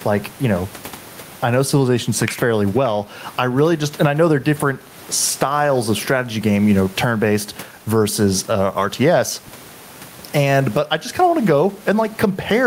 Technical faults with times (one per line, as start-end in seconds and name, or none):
0.00-12.66 gain pumping